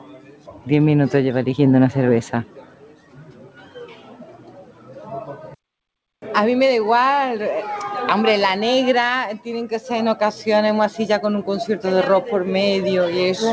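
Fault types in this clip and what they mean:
Noise suppressor applied to music or sounds: a speech-tuned suppressor stayed active and treated steady, sustained material as noise, so the level swings by roughly 10 dB. The waveform envelope pumps, and a spectrogram shows sustained energy and tails fading or flickering while onsets stay bright.
Sound cut by the noise suppressor: some stretches were judged to be noise and pulled down harder, by about 12 dB at 0.0–0.67 s and 2.44–5.11 s and about 8 dB at 5.3–5.55 s. The waveform visibly shrinks there, and the spectrogram dims below the 8 kHz ceiling.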